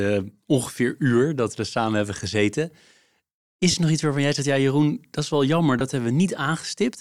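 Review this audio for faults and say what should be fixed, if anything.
There are two short dropouts from lost LE Audio frames in this speech clip. The first runs from 3.71 to 3.74 s (30 ms), right before "er nog iets waarvan". The second runs from 5.79 to 5.81 s (20 ms), just after "dat is wel jammer". Those lengths fit three and two 10 ms frames. For each gap, the LC3 decoder filled in by replaying the last good spectrum with randomised signs, so you hear a brief noise-like stand-in instead of the real sound. To prevent it, improve the Bluetooth link (less distance or interference, or more retransmission headroom) so frames aren't dropped.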